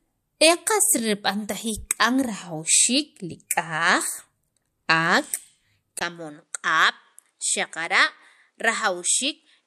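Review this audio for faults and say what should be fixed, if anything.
From 5.99 s to the end, the speech turns duller and about 5 dB quieter after a 20 ms gap. This is likely an input switched to a poorer device. A spectrogram shows everything above 11.6 kHz vanishing at 5.99 s with a new noise floor roughly 50 dB down, and the waveform shows the brief dropout and smaller amplitude. To prevent it, lock the recording input to one device so the system cannot reroute mid-session.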